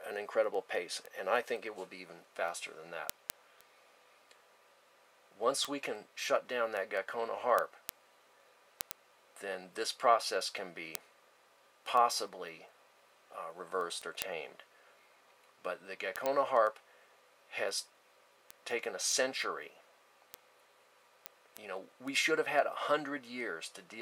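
From 0.14 to 23.92 s, word clock ticks recur about ten per second, one-sample slips of an unlocked clock; steady spacing rules out random clicks.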